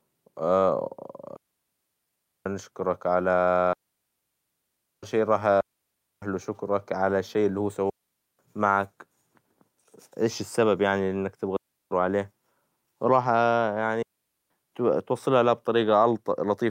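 Digital wireless dropouts occur at 1.36–2.46 s (ending just before "نشكرك على"), 3.73–5.03 s (ending before "شى راح"), 5.61–6.22 s, 7.90–8.39 s (after "على الشى اللى هو"), 11.56–11.91 s and 14.03–14.50 s. The radio link lost too much data, so the receiver muted, leaving clean near-silent holes from 0.35 to 1.3 s long, with no noise burst on either side.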